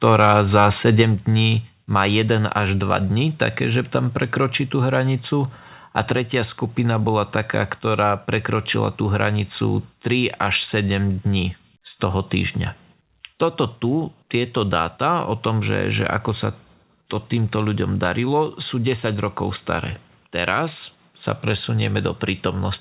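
From 0.19 to 1.01 s, the microphone input was likely set too high, driving the converter about 6 dB past its ceiling, so this is microphone overload. The loudest peaks hit the converter's limit and their tops are sheared flat, with somewhere around one percent of the samples affected across that stretch. That flattening adds a harsh, crackly edge to the strongest syllables, heard as a gritty buzz riding on the sound right up to just before "dní má".

At 1.02 s, the call software likely reacted to that distortion by cutting the device's input gain in a single step, a microphone volume stepped down event of about 4 dB. Everything in the signal, foreground and background together, suddenly drops in level at once, immediately after the clipped passage and just before "dní má". The audio is carried over a narrowband call path with nothing above 4 kHz, which fits G.711 A-law at 64 kbps.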